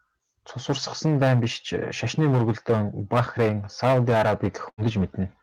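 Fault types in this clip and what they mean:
Hard clipping: the speech is pushed roughly 13 dB past what some stage can pass, so the peaks get sliced flat, around 5 percent of samples. That puts a harsh, fizzy edge on every loud syllable through the whole clip.
Burst of packet loss: from 4.69 to 4.81 s a run of audio never arrived in time. The receiver stretched the last sound for about 81 ms and faded it, then jumped ahead, so roughly 60 ms of speech is simply gone.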